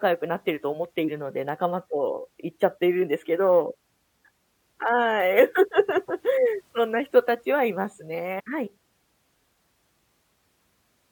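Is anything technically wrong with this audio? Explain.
Yes. A stream segment skipped at 8.38–8.41 s: the speech jumps abruptly ahead with a brief blip, likely because one stream segment failed to load and playback resumed at the next.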